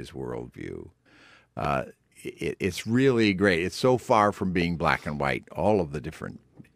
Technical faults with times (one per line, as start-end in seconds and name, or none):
1.65-1.67 loud pop
4.62-4.64 loud pop